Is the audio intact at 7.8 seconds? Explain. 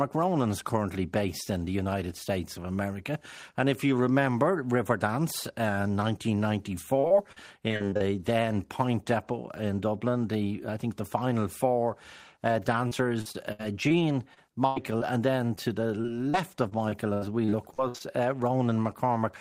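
No, 7.8 s sits inside a stretch of repeated packet loss (robotic sound) from 6.99 to 8.02 s. Eight short dropouts, the longest about 37 ms, get patched by stretching the previous sound, so that second comes out choppy with pieces missing.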